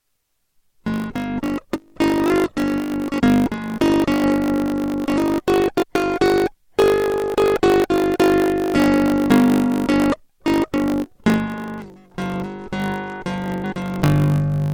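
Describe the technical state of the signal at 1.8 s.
At 1.8 s the music carries a block size mismatch (truncated), present throughout the clip. Each block loses its tail before the next stage reads it. That causes a buzz near 50 Hz and playback about 1.07 times fast at roughly normal pitch. This fits 1024-sample blocks.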